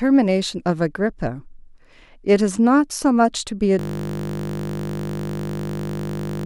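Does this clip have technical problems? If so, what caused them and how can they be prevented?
Yes. A system hang loop starts at 3.79 s and runs to the end: the audio path froze while the hardware kept replaying one 20 ms buffer, so the sound becomes a steady 50 Hz buzz. The waveform shows an identical 20 ms cycle repeated over a hundred times, and the spectrogram shows flat horizontal harmonics spaced 50 Hz apart. To prevent it, fix the stalling driver or process and have the audio callback output silence when no fresh data arrives.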